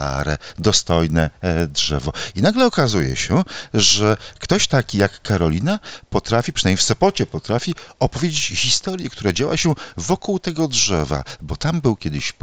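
Regular ticks at 10 Hz run throughout wherever there is sound. The resampler restarted on every block: each 100 ms block was converted from 16 kHz to 48 kHz separately, leaving small errors at the block edges.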